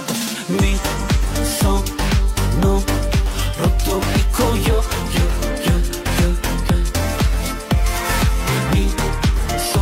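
Nothing stood out as a technical problem on listening to this audio.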